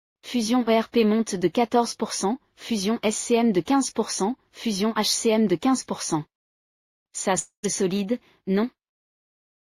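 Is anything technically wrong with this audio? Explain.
Yes. From 7.39 to 7.66 s there is likely a long network dropout. Audio stopped arriving, so the receiver extended the last sound as a fading buzz for 235 ms, 110 ms of it silence. The audio then resumes with 240 ms lost.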